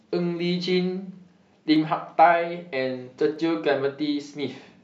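At 1.76 s and again at 3.36 s, the speech has a single sharp click. Each is a brief tick that cuts across the whole spectrum. The likely cause is dropped samples. A fraction of a millisecond goes missing, so the waveform jumps abruptly.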